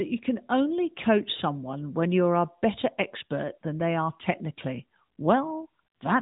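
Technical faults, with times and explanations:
Throughout: AMR narrowband mobile codec; nothing above 3.8 kHz, and pulse-driven vocal-tract modelling gives plainly buzzy, synthetic speech, fitting roughly 10 kbps.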